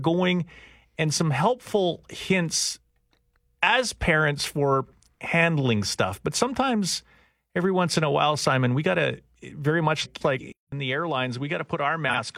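Speech, with two kinds of fault. Frames out of order appear three times: at 4.84 to 4.93 s, between "as parents for" and "handling stuff"; at 10.04 to 10.40 s, right after "got to very much"; and at 12.08 to 12.16 s. In each, two adjacent blocks play in swapped order (about 43 ms each in the short cases, about 171 ms in the longer one), giving a garbled flutter. Unlike a dropout or skip, nothing is missing and the timing stays intact. From 10.52 s to the end, the sound turns duller and a few dB quieter, with nothing above 10.1 kHz, a new low noise floor well beneath the speech and a 200 ms gap at the change. That is likely an input switched to a poorer device. The silence, the change in noise and the narrower band that persists to the end set it apart from a simple filter or level ride.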